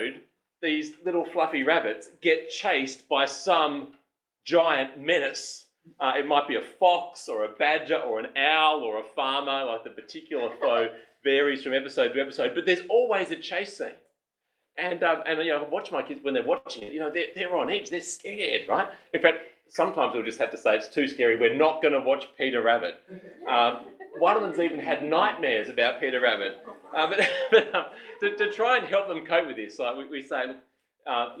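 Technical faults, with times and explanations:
16.57–16.67 s, short stall from a late packet: a packet arrived late, so the jitter buffer emptied and the last sound was stretched for about 79 ms before playback resumed where it stopped. Nothing is lost. The delay grows by 79 ms. On a spectrogram, a held, smeared stretch of repeated harmonics.
16.79–16.83 s, short concealed packet loss: 20 ms of audio never reached the decoder. The receiver extended the preceding sound for 17 ms and blended back, leaving a brief smear or wobble. The spectrogram shows a faint blurred slice.
16.83–16.90 s, burst of packet loss: consecutive packets lost, 40 ms missing in all. The receiver continued the last sound for about 47 ms, fading it down, then jumped ahead. On a spectrogram a decaying held band, in the waveform a dip in level, then an abrupt resumption.
17.14–19.84 s, call bitrate drop: the bandwidth estimate fell and the encoder went from 32 to 18 kbps, staying at the lowest rate for about 2.1 s. 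Coarser coding makes it rougher and duller. The spectrogram shows thinner, patchier upper frequencies until recovery.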